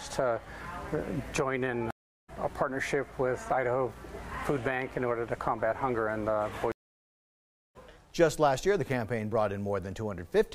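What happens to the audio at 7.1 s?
That's right in the middle of a stream reconnect running from about 6.72 to 7.77 s. The connection dropped, so the player goes dead silent for roughly 1.03 s, then reconnects and spins up a fresh decoder partway into the stream. When sound comes back it doesn't pick up where it left off. It lands somewhere around 0.7 s further on, so a chunk of the material is simply skipped, like a jump cut after the gap, with the first frame fading in.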